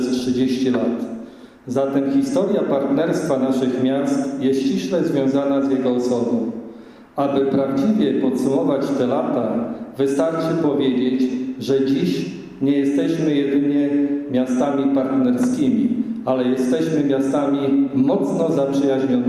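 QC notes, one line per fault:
No faults heard anywhere in the clip.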